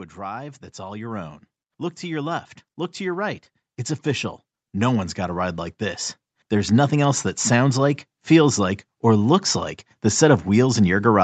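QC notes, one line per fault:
0.19–1.41 s, 2.0–3.49 s, 4.03–5.65 s: automatic gain rising. The AGC heard a quiet input and slowly pushed its gain up, about 5, 4 and 6 dB, so the speech and background swell together over each span.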